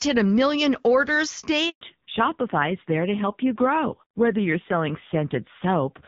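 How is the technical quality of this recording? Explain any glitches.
The recording has two connected glitches, both just after "hit a million orders".

The first is a handover gap from 1.69 to 1.81 s. The sound fades out quickly and stays silent for 120 ms. The call was being passed from one network to another. No speech frames reached the receiver during the switch. Nothing can fill that hole, so whatever was said in those 120 ms is gone. It sounds like a brief, clean dropout rather than a crackle.

The second is a fallback to narrowband, from 1.81 s to the end. Before the gap, the call runs on the AMR wideband (HD Voice) codec with only light coding damage, which fits a rate around 12.65 kbit/s. After the switch, the new link uses an older narrowband codec. Nothing above 4 kHz survives. The sibilants lose their crispness and the sound turns muffled. The low rate, which points to about 5.9 kbit/s, adds a rough, grainy edge.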